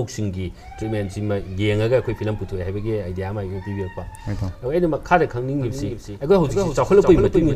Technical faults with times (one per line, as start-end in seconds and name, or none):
5.61-7.56 doubled audio track